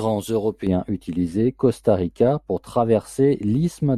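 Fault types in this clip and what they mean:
De-emphasis applied wrongly: a treble cut meant to undo pre-emphasis hits speech that had none, or is applied twice, so from 0.67 s onward the highs sag gently and sound muffled, about 11 dB down at 10 kHz relative to 1 kHz. Unlike a low-pass filter, there is no abrupt cutoff edge.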